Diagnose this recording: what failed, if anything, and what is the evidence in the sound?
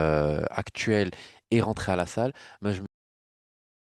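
A cut-off end, failing at the buffer stage: the speech stops mid-sound at 2.86 s and falls straight to digital silence with no decay. The final buffers of audio were never written or played out, so the recording ends before the sound does.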